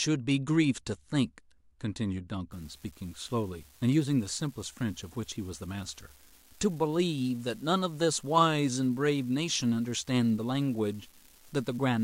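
From about 2.52 s to the end of the speech, a steady fine crackle or fizz sits under the audio and keeps going through the pauses. This is an unreliable data bit: one data line is marginal, so its bit comes out wrong in a random share of samples. Each wrong bit adds a spike of the same size, about -41 dBFS, and the scatter of identical spikes is what produces the constant fizz.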